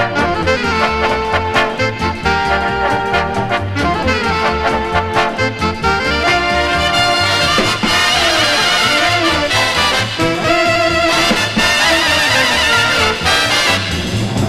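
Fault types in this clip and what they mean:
Nothing's wrong here: there are no glitches, dropouts or other technical faults to point to anywhere in the audio.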